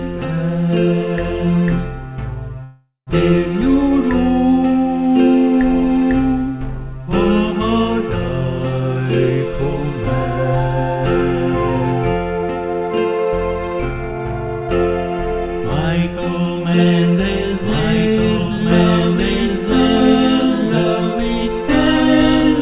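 At 2.64 s the audio stalls for about 0.43 s, until 3.09 s, in a call audio freeze, likely caused by packets held up in transit that left the jitter buffer empty. The receiver extends the last sound as a fading buzz or hiss, then about 150 ms of silence, before resuming where it stopped, so nothing is lost but everything after shifts later. A spectrogram shows a smeared, decaying band ending in a blank gap; the waveform shows a shrinking tail, then flat line.

From 12.37 s to 14.69 s a jitter buffer speed-up plays the audio at about 115% speed with unchanged pitch. Too much audio had built up in the buffer, so the receiver repeatedly cut out short pitch-period slices, dropping about 0.3 s in total, which makes the passage sound hurried. On a waveform the cycles keep their length, but whole cycles are missing at intervals. On a spectrogram, features within the call path's band, which ends at 4 kHz, arrive closer together than in the surrounding audio.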